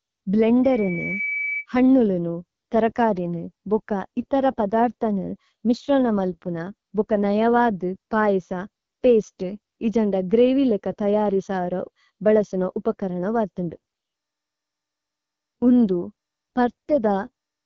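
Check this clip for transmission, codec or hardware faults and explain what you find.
Two problems turn up here: a burst of feedback near the start and low-rate codec damage across the whole clip.

From 0.63 to 1.66 s there's a loudspeaker feedback squeal, ending just before "ഹന്നുലുനു ഥരകരിനു ബുക ഇഥര". A mic was picking up the speaker it was driving, and at 2.3 kHz the loop gain went above one, so that tone fed on itself. You hear a single whistle swelling over roughly half a second until it sits only a little below the speech level.

The entire clip also carries the AMR wideband (HD Voice) codec, and the damage is plainly audible. AMR-WB rebuilds speech from a pulse-excited vocal tract model, and at this rate there's too little detail to do it cleanly, so the speech comes out rough and raspy. The roughness suggests one of the lower modes, around 8.85 kbit/s. Everything above about 6.8 kHz is missing, and the top band that remains is synthetic shaped noise rather than real detail.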